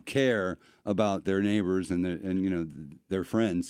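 No technical faults can be heard anywhere in this speech recording. Nothing in the audio stands out as a problem at any moment.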